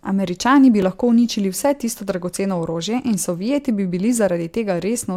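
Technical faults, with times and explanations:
0.82 s: block of digital silence. For 2.4 ms just before "lahko uničili vse tisto", the sound cuts out and returns abruptly, too briefly to be heard as silence, so it comes across as a tick or dip.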